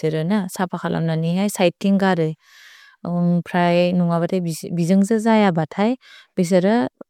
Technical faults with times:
none

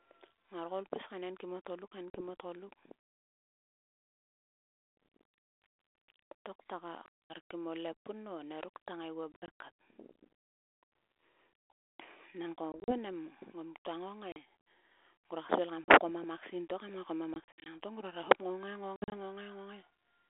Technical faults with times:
2.10-2.22 packet loss on an ADPCM call
7.06-7.34 packet loss on an ADPCM call
9.32-9.49 packet loss on an ADPCM call
12.72-12.95 packet loss on an ADPCM call
14.32-14.37 packet loss on an ADPCM call
15.84-15.94 packet loss on an ADPCM call
17.34-17.74 packet loss on an ADPCM call
18.96-19.15 packet loss on an ADPCM call

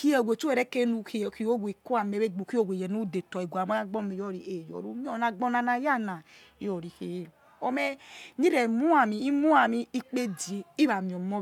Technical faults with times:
none

